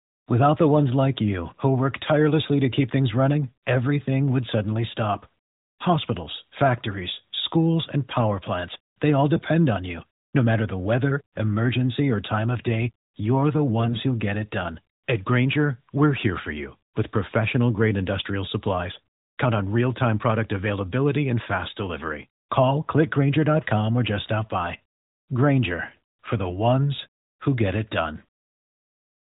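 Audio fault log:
9.36–9.45 s and 13.80–14.00 s, AMR bit errors: brief hoarse, scratchy, gargling bursts while pitch and level hold. A few percent of the weakly protected bits in several 20 ms frames of the light 12.2 kbps AMR-NB stream arrived flipped, misplacing excitation pulses and skewing fine gain and spectral values.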